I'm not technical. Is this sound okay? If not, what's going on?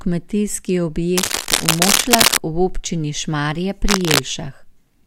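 No. A worn cable or connector was likely being moved, and its shaky contact sent bursts of noise into the recording. This cable scratch noise sounds like scratching or rustling over the speech from 1.17 to 2.38 seconds and again from 3.87 to 4.22 seconds.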